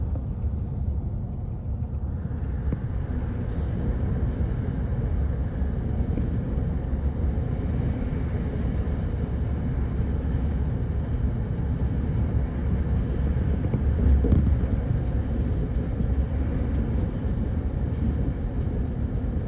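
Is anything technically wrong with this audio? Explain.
No, nothing technically wrong stood out on listening to this audio.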